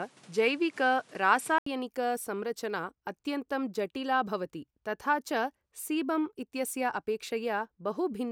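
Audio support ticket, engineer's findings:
Input switched to a poorer device, 0.00 to 1.66 s. Band-limited, dull opening, nothing above 11.8 kHz, with a noise floor roughly 30 dB under the signal. About 80 ms gap at 1.66 s, then full bandwidth from "संरचना अत्यन्तं जटिला भवति". No noticeable level jump. Likely cause: capture began on a narrower secondary input before the system switched to the main microphone.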